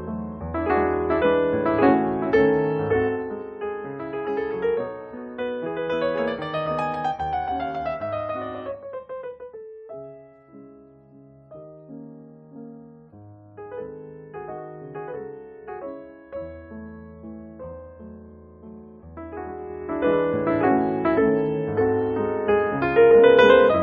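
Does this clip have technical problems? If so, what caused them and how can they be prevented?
Yes. Zipper noise from 3.05 to 3.51 s: the level drops about 10 dB in coarse 2 dB steps, roughly fifteen per second, each step ticking audibly. Smoothing or ramping gain changes per sample prevents it.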